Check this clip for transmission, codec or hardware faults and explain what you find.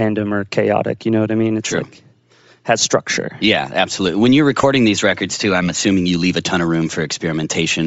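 Two faults are present: codec damage across the whole speech clip, and a brief dropout near the middle.

Throughout, the speech has a breathy, grainy top end, with upper frequencies replaced by noise-like fill. This is likely Bluetooth LC3 compression, a transform codec zeroing high bands at low bitrate; the damage is plainly audible and fits roughly 32 kbps with 7.5 ms frames.

From 4.62 to 4.64 s, lost LE Audio frames cause a short, noisy smear. The decoder concealed the gap by repeating the previous spectrum with randomised signs, roughly 15 ms of concealment, consistent with two missing frames.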